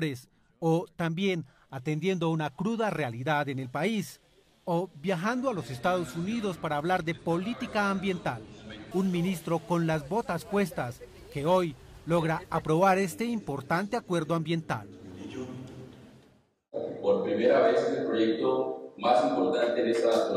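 No technical faults can be heard anywhere in this audio. Nothing in the sound points to a problem in how it was captured, processed or played back.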